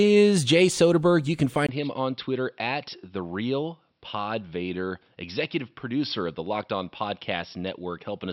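Speech clip; at 1.67 s a 20 ms gap precedes duller, quieter sound, likely an input switched to a poorer device. The spectrogram goes empty above 5.6 kHz, and the waveform shrinks by around 5 dB.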